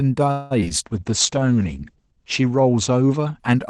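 From 0.31 to 0.72 s there is repeated packet loss, heard as robotic sound. Four gaps fall within about 0.4 s, the longest about 190 ms. Each is patched by stretching the preceding sound, covering about 230 ms, while about 80 ms simply drops out, so more than half the span is concealment. A single dropout leaves one clean hole. Here the holes recur, so the speech turns choppy, with fragments missing.

A call bitrate drop runs from 0.86 to 3.46 s and stays at its lowest for about 1.2 s. The sound points to the Opus encoder being pushed from roughly 32 kbps down to about 11 kbps. Its audio bandwidth narrows from 12 kHz to 8 kHz, so the top end goes muffled. A plain low-pass filter would only dull the sound, but here coarser coding also makes the speech rough and watery until the rate recovers.

Overlapping its start, a jitter buffer slow-down runs from 0.93 to 1.40 s. To rebuild its reserve, the receiver repeats short pitch periods and slivers of pause, adding 37 ms and playing this stretch at 94% speed. 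The result is drawn-out sound. A slowed tape or resampling fault would also lower the pitch, but here the pitch stays where it was and only the timing stretches.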